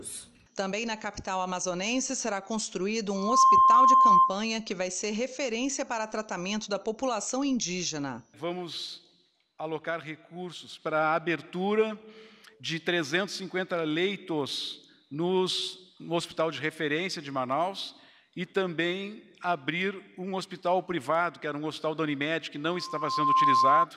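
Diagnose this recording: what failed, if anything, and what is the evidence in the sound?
What failed is an acoustic loop on the analogue side: a loudspeaker feedback squeal, twice. A pure 1 kHz tone swells up from 3.15 to 4.39 s, reaching full strength in about a third of a second and sitting well above the programme, then returns from 22.65 to 23.86 s, climbing more slowly over most of a second to a slightly lower level. The mic is hearing its own speaker, and at 1 kHz the loop gain tops one, so that frequency feeds itself.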